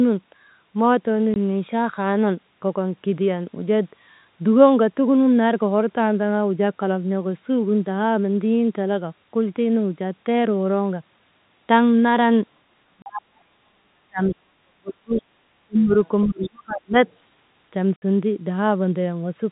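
At 1.34 to 1.36 s there is packet loss filled with silence. The sound drops out for 20 ms. The hole has hard edges. The receiver simply played nothing where a packet went missing. The gap length fits a 20 ms packet.

From 12.88 to 15.23 s the speech is suppressed in double talk. The level dips unevenly, at worst by roughly 40 dB, for about two seconds in total. The likely cause is an echo canceller that heard both sides at once and turned everything down.

Inside that stretch, at 13.02 to 13.06 s, a second silent gap of 40 ms appears. It fits two lost packets.

At 15.65 to 15.92 s the speech dips again, by roughly 35 dB, for about 0.3 s. This is the same double-talk suppression, likely from the canceller clamping down.

At 16.06 to 16.48 s the other side's voice leaks through, about 20 dB below the talker. The likely cause is loudspeaker sound the echo canceller failed to remove from the microphone. 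Overlapping this, from 16.26 to 16.98 s, the talker is pushed down by roughly 35 dB for about 0.7 s.

At 17.07 to 17.32 s a fainter scrap of the other side leaks in, about 35 dB down.

At 17.96 to 18.02 s there is a 60 ms silent hole. It fits three lost packets.

The telephone band of the G.711 coding, with nothing above 4 kHz, is heard throughout.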